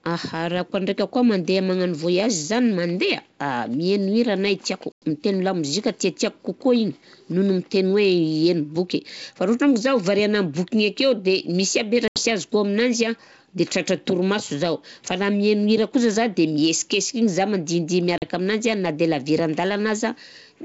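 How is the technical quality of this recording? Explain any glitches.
The recording has three dropouts from packet loss on an ADPCM call, heard against clear wideband G.722 coding with little audible hiss.

At 4.92 to 5.05 s, between "hira anahy tiako" and "mitegno lamoziky tiatiako", about 100 ms of speech is lost. Again at 12.08 to 12.23 s, just before "sy azoko aminazy an", 80 ms goes missing, and at 18.18 to 18.23 s a further 40 ms drops out. Each time a few packets went missing and were filled with silence. The decoder's predictor and step size then no longer matched the sender's, so each sharp-edged gap is followed by speech returning with brief, slight distortion before it settles.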